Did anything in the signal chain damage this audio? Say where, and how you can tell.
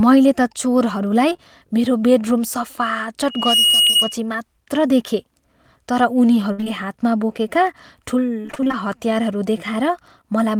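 Yes. Repeated packet loss (robotic sound) in the network stage at 1.29–1.40 s (between "मैले त चोरहरूलाई" and "मेरो बेडरुम"), 6.52–6.68 s (before "हातमा बोकेका") and 8.42–8.75 s. Unlike a single dropout, these are runs of gaps, each patched by extending the last sound.

Loudspeaker feedback squeal from 3.29 to 4.16 s: a single 2.9 kHz tone swells over roughly 0.3 s to about 5 dB above the signal. The microphone is re-amplifying its own loudspeaker, which produces a steady tone rather than broadband noise or low hum.

Short concealed packet loss on the network at 3.86–3.91 s and 3.91–3.94 s: each hole is filled from the preceding sound, leaving a brief smear instead of the sustained choppiness of the repeated losses.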